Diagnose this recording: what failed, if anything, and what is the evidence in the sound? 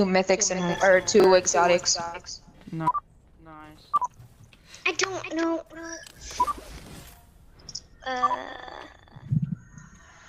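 At 1.2 to 1.24 s the sound briefly jumbles: two 20 ms chunks play in the wrong order, so the flow stutters for an instant. The fault is chunks out of order. One 20 ms chunk reached the stream one chunk late, either arriving late over the network or being written late into the buffer. Nothing is missing, but the swapped order puts three hard joins into that short stretch.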